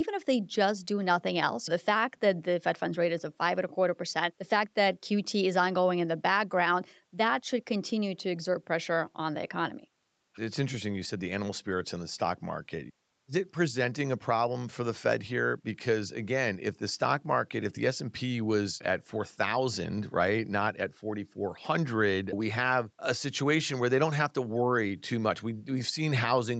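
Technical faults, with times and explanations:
No technical faults found.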